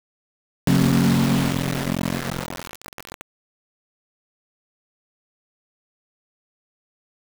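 A music clip with a cut-off start. The first 0.67 s is digital silence, and at 0.67 s the music enters abruptly, already in the middle of a sound, with no natural attack or fade-in. The capture or stream began late, so whatever was playing before that point was never recorded. The listener hears the material as if it had been switched on partway through a passage rather than starting from its beginning.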